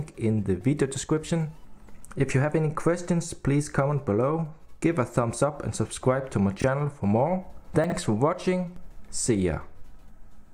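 At 6.6 s and again at 7.84 s, chunks play out of order. A 20 ms piece arrives one, then three, chunks late. Each is a brief jumbled moment with hard joins.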